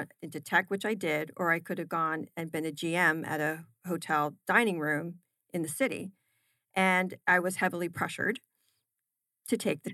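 No technical faults can be heard anywhere in the recording.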